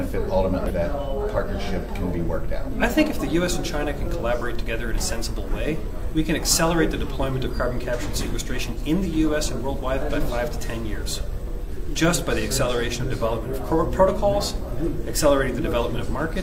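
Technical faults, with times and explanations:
0.66–0.72 s, damaged data in a compressed stream: corrupted bytes derail the decoder for about 54 ms, so it misreads frames and hunts for the next header, giving a brief glitch; a spectrogram shows a smeared broadband or blocky burst, and the waveform a short jagged discontinuity.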